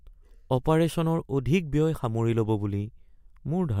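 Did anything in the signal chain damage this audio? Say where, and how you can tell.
No, no damage detected.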